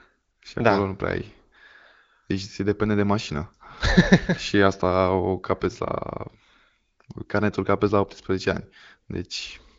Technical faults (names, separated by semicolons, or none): none